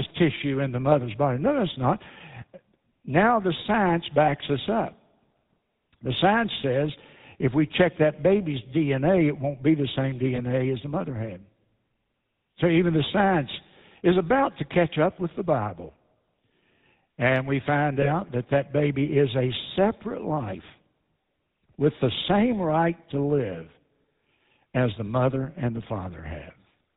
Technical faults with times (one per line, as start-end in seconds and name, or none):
0.00-26.97 GSM full-rate codec
4.26-4.30 lost GSM frames
10.36-10.41 lost GSM frames
18.02-18.10 lost GSM frames